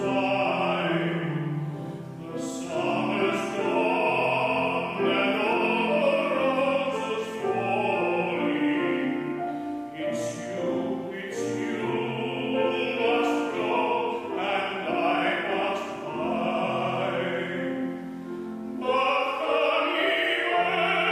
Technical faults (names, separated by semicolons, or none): none